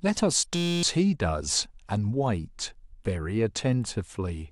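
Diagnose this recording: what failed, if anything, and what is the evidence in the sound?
A system hang loop from 0.55 to 0.83 s is a driver or buffer failure. The speech stops and is replaced by a steady buzz at about 172 Hz, one 5.8 ms fragment repeated exactly, which fits a 256-sample ring buffer. The host or driver froze and stopped refilling the buffer while the sound hardware kept cycling through the same stale block. Roughly a third of a second of speech is lost.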